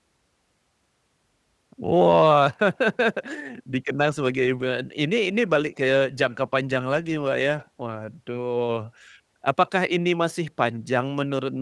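No technical faults in this speech.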